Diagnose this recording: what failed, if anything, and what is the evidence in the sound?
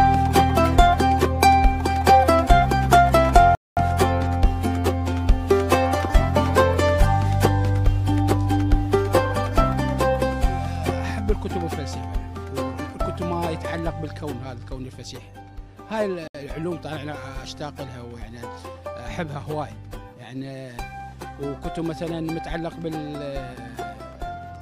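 Two dropouts to dead silence, at 3.55 s for about 0.22 s and at 16.28 s for about 0.07 s, each resuming mid-flow. That's likely a Bluetooth stall: radio interference delays packets, the headphone buffer empties, and playback waits for the retransmissions.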